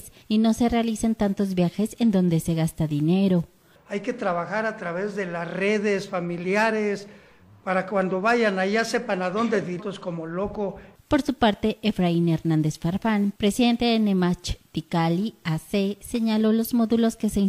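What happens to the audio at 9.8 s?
At 9.76 to 9.82 s the sound jumps abruptly ahead with a brief blip. This is a stream segment skipped. One segment of the stream likely failed to load, and the player carried on with the next. The missing stretch is simply gone.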